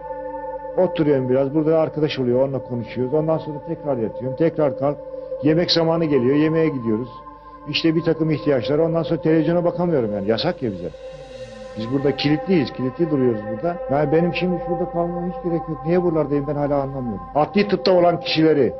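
No technical faults can be heard anywhere in this recording.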